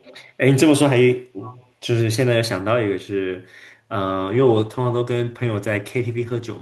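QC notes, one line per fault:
0.0–0.21 s and 1.44–1.66 s, echo leak: likely incomplete echo cancellation at the far loudspeaker returns a faint copy, roughly 25–30 dB down, delayed 383 ms.
4.04–6.6 s, call bitrate drop: encoder starved of bits codes coarsely and trims highs; sound turns rough and muffled to the end, consistent with 64 falling to 14 kbps.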